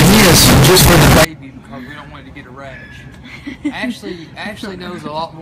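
From the start to 1.25 s the audio is blaring and harsh, with the waveform slammed into a near-square shape at an almost fixed, high level and background noise as loud as everything else. This is likely a float read as integer: 32-bit float samples interpreted as 32-bit integers.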